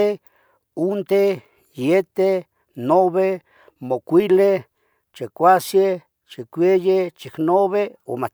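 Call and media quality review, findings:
No technical faults heard in the speech signal; level, timing and continuity stay steady throughout, with nothing to log against any component.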